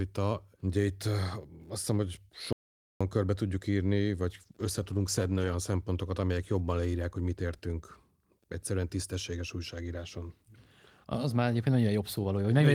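Speech that cuts out completely from 2.53 to 3.01 s, right after "azt hiszem hogy", returning at "körbe tudjuk írni". For about 0.48 s there is dead silence with no room tone underneath, and whatever was said in that gap is simply missing. That is an audio dropout to silence, most likely the input being lost briefly while the recording chain carried on writing silence. A second problem follows after "körbe tudjuk írni": from 4.31 to 5.62 s the voice turns rough and dull, with the top end thinned, until clarity returns around "amelyek jobban leírják hogy". This is a call bitrate drop, with the encoder forced down from 40 to 18 kbps and held at its lowest for about 1.25 s. At that rate the codec quantises more coarsely and trims high frequencies, which produces the smeared, muffled texture.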